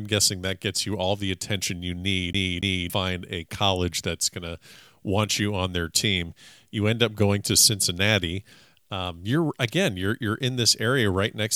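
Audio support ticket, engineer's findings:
Skipping-CD stutter on speech, 2.33 to 2.90 s. The same 0.28 s segment plays twice, with a brief mute at each jump. Component: disc source, CD stuck on one turn. Mechanism: a scratch throws the laser back one track each revolution.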